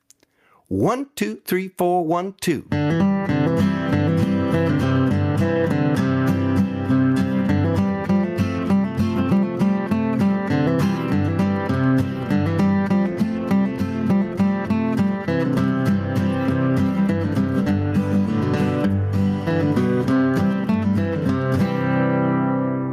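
Gain pumping runs through the whole recording, with the level swinging by roughly 15 dB. The likely cause is input gain set far too high, with a fast limiter clamping every peak.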